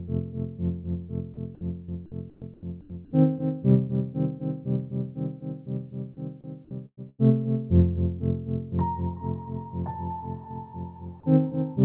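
At 1.85 s a short concealed packet loss occurs. About 30 ms of audio never arrived, and the receiver covered the hole with roughly 28 ms of extrapolated sound, continuing whatever was playing before blending back into the real signal. It is heard as a brief smear or wobble rather than a dropout. Unlike the later bursts, it is too short for anything to fade.

From 2.30 to 2.42 s, 2.54 to 2.63 s and 2.81 to 2.90 s, the background in the quiet stretches is swapped for a steady, featureless hiss. The swaps last 120, 90 and 90 ms. They sit about 11, 5 and 5 dB below the surrounding background. This is likely comfort noise in place of the background, generated while the sender paused transmission. What separates it from packet loss is that no sound goes missing. Only the texture of the background is replaced by smooth synthetic noise.

At 6.86 s and again at 7.09 s there is a burst of packet loss. 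The first removes about 120 ms. The receiver stretched the last sound for about 113 ms, letting it decay into a fading buzz or hiss, and the final 50 ms or so are silent. The second removes about 90 ms in the same way. Unlike the single short loss, each gap lasts long enough for the held sound to fade, and the audio then resumes further on with the material in between gone.

The call path itself leaves nothing above 4 kHz, which fits a narrowband codec such as G.711.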